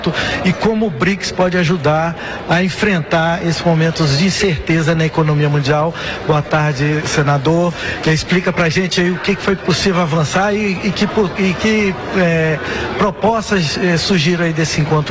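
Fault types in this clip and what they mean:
Nothing stood out on listening; the sound arrives as expected over the call path, with the top end stopping around 8 kHz.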